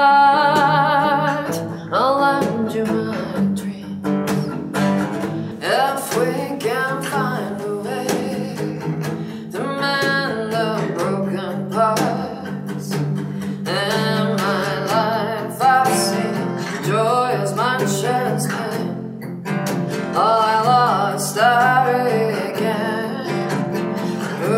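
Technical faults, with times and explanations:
22.74–23.69 s, Bluetooth SBC bit pool drop: treble goes dull and gritty noise creeps in as coarser encoding starves the top sub-bands, which fits a bit pool halved from 28 to 14.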